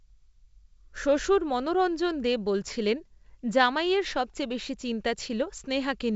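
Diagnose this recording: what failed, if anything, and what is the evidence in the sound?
Nothing failed; the speech carries no audible faults.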